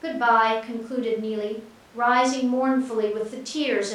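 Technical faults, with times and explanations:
No technical faults are audible anywhere in this speech.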